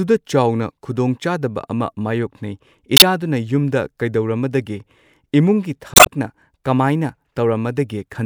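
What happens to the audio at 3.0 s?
Right around there, from 2.97 to 3.02 s, there's damaged data in the compressed stream. Part of the data went bad, so the decoder misreads those frames, loses its place, and hunts for the next frame header. You hear a quick glitch, a chirp, squawk, click or short hole, about 56 ms long, in the speech.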